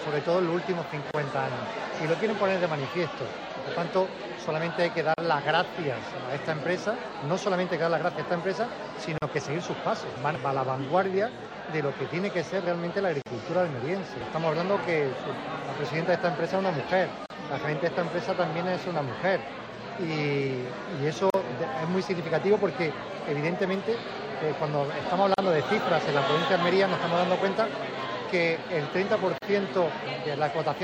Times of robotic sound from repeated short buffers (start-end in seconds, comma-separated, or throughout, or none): none